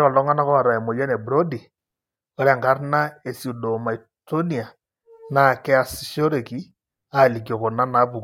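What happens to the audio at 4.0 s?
Nothing goes wrong at 4.0 s; the speech carries on intact through that moment with no audible fault.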